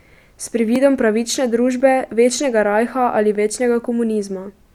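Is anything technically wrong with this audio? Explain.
Yes. Two blocks of digital silence interrupt this speech, at 0.76 s and at 1.80 s, the second just before "večnega rajha ali". In each, the signal cuts out and returns with no fade, most likely because the output buffer wasn't filled in time. The gaps are tiny, about 1.45 ms and 0.73 ms, which fits blocks of 64 and 32 samples. That is too short to be heard as a hole, so each comes across as a tick or dip.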